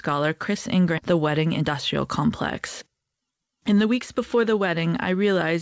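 Speech clip carried over a call path whose bandwidth stops at 8 kHz, consistent with G.722. At 0.98–1.00 s there is a skip ahead: roughly a second of audio is dropped with no fill, and the two sides are spliced almost directly, so the speech jumps forward abruptly. This fits a jitter buffer discarding its backlog. Two jitter buffer speed-ups follow as the buffer drains surplus delay by cutting short pitch-period segments repeatedly. From 1.12 to 2.23 s the speech runs at 109% of normal speed, losing about a tenth of a second. From 2.87 to 4.69 s it runs at 115%, losing around 300 ms. In both stretches the pitch is unchanged but the delivery sounds noticeably hurried.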